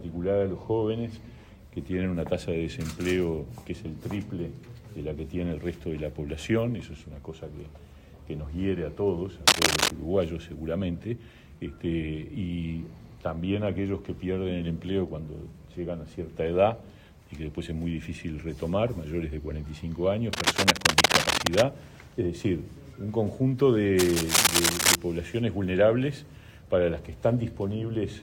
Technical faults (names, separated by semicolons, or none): cable scratch noise